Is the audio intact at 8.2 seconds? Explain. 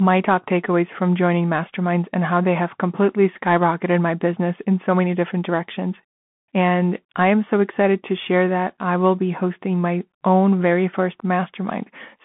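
No. At 8.2 seconds, as throughout the clip, the speech sounds narrow and boxy, with s sounds turned scratchy, a granular hiss beneath the voice, and nothing above about 3.8 kHz. This is Bluetooth CVSD headset codec damage. The line passes only about 150 Hz to 3.5 kHz, and the codec encodes each sample as a single up-or-down step whose size adapts, which fits a 64 kbps stream. Loud high-frequency sounds outrun that step and distort.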